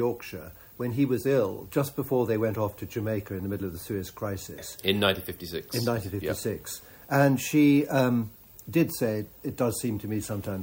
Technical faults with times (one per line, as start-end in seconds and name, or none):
0.00-10.62 low bit depth without dither